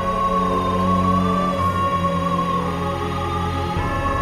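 Timecode bleed runs throughout: a chirping warble near 1 and 2 kHz, about 20 dB under the sound, fitting 23.976 fps code. Unlike a steady whistle, it flips between two pitches.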